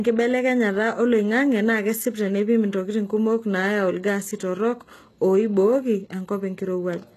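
From the start, the s sounds and upper treble come across gritty and metallic, with nothing above 12.3 kHz. This is plainly audible damage from HE-AAC compression, likely at a low bitrate that fits about 16 kbps, where the treble is rebuilt from copied lower bands rather than coded.

From 0.1 s to 7.12 s, a faint, steady ticking runs under the speech about every 70 ms, around a hundred in all, blurring into a soft rattle. These are clock slip clicks, likely from two unsynchronised clocks differing by a few hundred parts per million, so a single sample is dropped or repeated each time.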